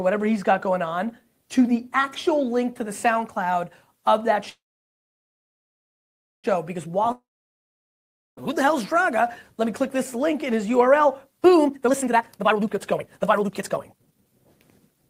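At 4.49 s the sound stops and the last fragment carries on briefly as a fading buzz before nearly 1.9 s of silence; at 6.46 s it resumes exactly where it broke off, with nothing skipped. This is a call audio freeze, likely caused by packets held up in transit so the jitter buffer ran dry. The receiver stretched the final sound and then waited, inserting roughly 1.94 s of gap and leaving everything afterwards delayed by that much. A second interruption runs from 7.12 s to 8.39 s. Again a short buzzy tail decays into about 1.15 s of silence, but this time the audio returns further along, with about 1.26 s of material missing. That pattern marks a long network dropout, likely from a stretch in which no packets arrived at all, so the receiver could only conceal briefly before falling silent, and the lost audio was never played. From 11.64 s to 14.40 s the sound rushes forward at about 165% of normal speed while its pitch stays unchanged, giving a hurried quality. 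This is a jitter buffer speed-up. The buffer held more audio than it aims for, and to bring the delay back down the receiver repeatedly cut out tiny pitch-period-sized pieces, removing about two seconds of audio over that stretch.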